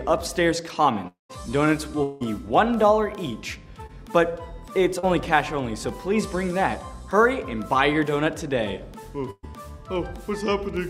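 At 1.07 s the audio stops arriving. This is likely a long network dropout. The last sound is carried on as a fading buzz or hiss, then drops to silence for about 140 ms. It returns at 1.31 s, with about 0.22 s lost. A second likely dropout runs from 2.03 to 2.22 s. Here the continued sound fills the whole gap with no silence, and about 0.18 s never plays.

At 3.86 to 3.91 s there is a short concealed packet loss. About 20 ms failed to reach the decoder in time. The receiver extends the previous sound and blends back in, so it comes across as a brief smear or wobble. A second one follows at 4.99 to 5.05 s. About 40 ms is missing, and the patch gives a slightly longer wobble before the real audio returns.

From 9.31 to 9.45 s a burst of packet loss removes about 120 ms. The receiver continues the last sound and turns it down as the gap goes on. It fades to silence for its final 40 ms. The audio then picks up further along, and the missing part is simply gone.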